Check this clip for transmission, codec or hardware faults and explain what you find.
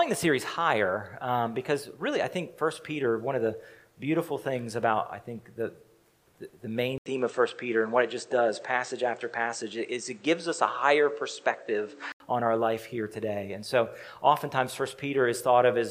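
One fault stands out: an input switched to a poorer device between 6.98 and 12.20 s. An 80 ms silence marks the changeover, and then the sound turns duller and a few decibels different in level, with a new noise floor sitting well below the signal. The likely cause is the system moving to another microphone or a headset call profile with a narrower passband. On a spectrogram, everything above 8.5 kHz vanishes across that span. The waveform shows a brief flat gap, then a step in amplitude.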